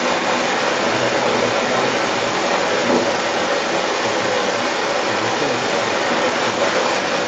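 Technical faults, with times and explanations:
Throughout: other side's voice leaking through. A second voice runs under the talker for the whole clip, sitting roughly 10 dB above the main speech. The likely cause is a loudspeaker feeding the far end back into the microphone, with the echo canceller leaving much of it behind. On a spectrogram, two overlapping sets of harmonic stripes appear, both stopping at the 8 kHz call band edge.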